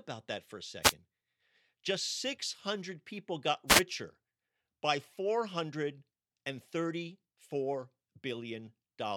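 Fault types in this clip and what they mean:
wireless microphone noise hit: When the analogue FM radio link from the microphone fades because reflected signals cancel the direct one, the receiver's own noise rises through the speech. Here that gives two short swishes of static, about 0.12 s from 0.82 s and about 0.15 s from 3.67 s. On a spectrogram each appears as a brief broadband smear of noise across the full height. On the waveform it shows as a hashy, raised stretch over the speech.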